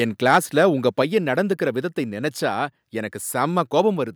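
A speech recording where the microphone input was likely set too high, so from 0.28 to 0.38 s peaks overshoot the converter by about 4 dB: microphone overload, with flattened tops on a small share of samples giving a harsh crackle.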